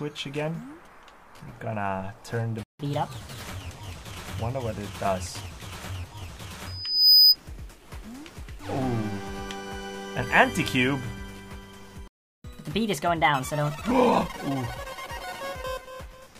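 At 2.63 s the sound cuts out for 0.16 s, a playback stall, likely from the player running short of data. From 2.79 to 3.44 s it resumes in a catch-up at higher speed: 1.25 times faster and about four semitones sharp, then settles. At 6.66 s a loudspeaker feedback squeal begins. A 5 kHz tone swells over a little under half a second to roughly 15 dB above the sound. The microphone-to-speaker loop has gain above one there. It ends at 7.37 s. At 12.08 s a longer playback stall silences the sound for 0.37 s, likely from a blocked playback thread. The catch-up that follows runs from 12.44 to 13.91 s, again 1.25 times fast and about four semitones high.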